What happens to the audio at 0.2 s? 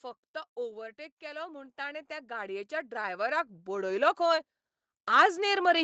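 Nothing goes wrong at 0.2 s: the speech there passes through intact.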